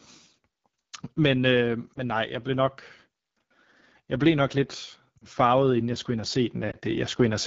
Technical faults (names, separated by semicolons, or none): AMR wideband (HD Voice) codec; lost AMR speech frames